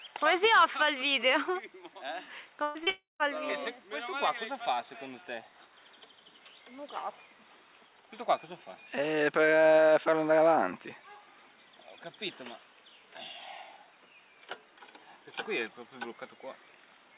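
From 2.63 to 2.78 s a burst of packet loss leaves about 120 ms filled by a fading continuation of the last sound, with no silence, unlike a dropout. At 2.84 to 2.90 s a short concealed packet loss patches roughly 30 ms, giving a brief smear rather than an audible fade. From 2.90 to 3.23 s the continuation dies away into about 160 ms of silence before the sound resumes further on, the part in between gone. This points to a likely long network dropout. Throughout, the call path carries nothing above 4 kHz.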